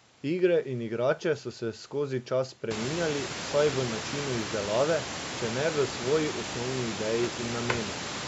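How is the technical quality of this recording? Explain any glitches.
Three brief clicks from dropped samples interrupt this speech recording, against room noise that rises by about 25 dB around 2.5 s yet stays about 11 dB below the voice, with the lowest bass taken out by call microphone processing.

Dropped samples occur at 1.19 s (just before "so se skozi čas"), 4.41 s (between "spreminjali vsaj v načinu" and "izdelave če ne v") and 7.25 s (after "ne v svoji osnovni"). Each is likely a fraction of a millisecond missing from the stream, making the waveform jump abruptly and produce a single sharp click.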